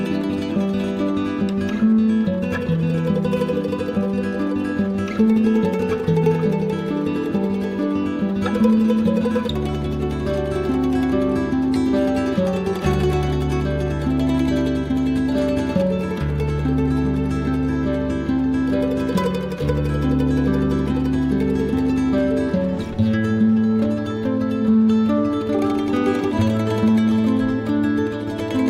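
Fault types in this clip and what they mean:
Nothing stood out on listening.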